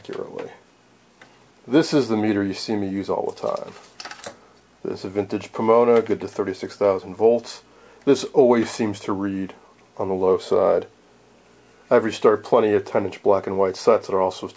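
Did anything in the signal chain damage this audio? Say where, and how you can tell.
No, nothing in the chain damaged this audio.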